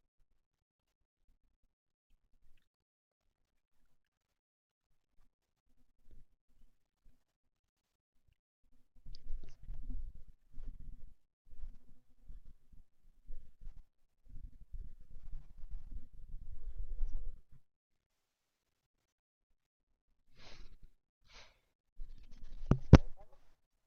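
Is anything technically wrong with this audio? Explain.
No, nothing is technically wrong with this audio.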